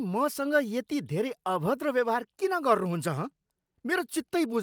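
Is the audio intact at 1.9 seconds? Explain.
Yes, the speech at 1.9 s plays through cleanly, with no audible fault at that moment.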